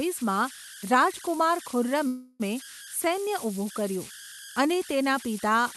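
Speech recorded through an Opus call path, with its top end rolled off near 12 kHz, carries converter idle tones throughout: a tone around 1.5 kHz sitting about 15 dB below the signal, produced by an undithered delta-sigma converter cycling through repeating bit patterns. Unlike mains hum, it rides on grainy noise rather than a fixed low harmonic series. From 2.07 to 2.42 s a call audio freeze stretches the last sound into a fading buzz or hiss for 324 ms, likely because delayed packets emptied the jitter buffer. Unlike packet loss, nothing is dropped: the speech resumes where it stopped, 324 ms late.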